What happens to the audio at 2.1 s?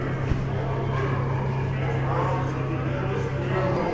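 At 2.1 s the sound is affected by a wrong sample rate, a fault present for the whole clip rather than just at that moment. The samples are played back slower than they were captured, with no rate conversion, so everything runs at about two-thirds speed and drops about 7 semitones in pitch. The sounds come out low, dragged and sluggish, which fits material recorded at 24 kHz being played at 16 kHz.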